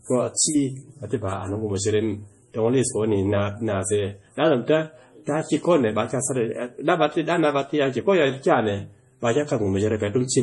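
Throughout the speech, nothing sounds above 11.4 kHz, and the highs turn watery and swirly with chirpy s sounds. This is likely heavy MP3 compression, fitting a bitrate near 32 kbps. A spectrogram shows a hard ceiling at 11.4 kHz with flickering, speckled gaps beneath.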